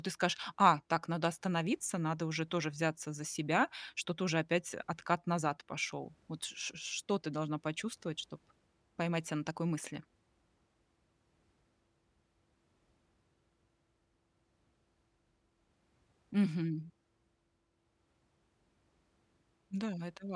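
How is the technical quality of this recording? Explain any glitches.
The technical quality of this recording holds up, with no glitches to explain.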